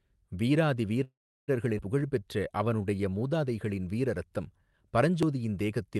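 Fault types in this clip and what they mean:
call audio freeze: From 1.03 to 1.50 s the speech stops and a fading tail trails into about 0.35 s of silence, then resumes where it left off with nothing lost. Late packets likely emptied the jitter buffer, adding 444 ms of delay.
skip ahead: At 1.78 to 1.81 s the speech jumps forward with almost no gap, about a fifth of a second missing and the two sides joined nearly directly. Part of the delay built up during the freeze was discarded to catch up.
jitter buffer slow-down: From 1.99 to 3.30 s the speech drags at 88% speed with unchanged pitch, sounds drawn out. The receiver repeated pitch periods and bits of pause, adding 166 ms to rebuild its reserve after the skip.
dropped buffer (overrun): At 5.23 s there is a small jump in the speech, roughly 10 ms gone and the edges butted together. The likely cause is the program missing a hardware buffer before it was overwritten.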